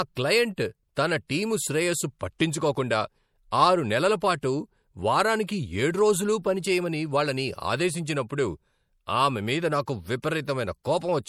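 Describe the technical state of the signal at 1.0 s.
Just before 1.0 s, from 0.95 to 0.97 s, there is pre-echo: a hiss spread over about 20 ms ahead of a sharp onset, which then lands soft and smeared. The codec spreads its quantisation noise across a whole transform block, so noise meant for the loud attack leaks into the quiet instant before it. On a spectrogram this shows as a thin broadband smudge preceding the onset. On the waveform, low-level fuzz appears where there should be near-silence.

Throughout the speech, including at 1.0 s, plainly audible damage of the watery, swirly kind is likely the result of MP3 compression at a rate around 64 kbps. Weak frequency lines drop in and out between frames, giving sibilants a metallic, chirpy edge and blurring consonant attacks. On a spectrogram the upper bands look speckled and patchy, with energy blinking on and off frame to frame, and content stops at a cutoff around 20.2 kHz.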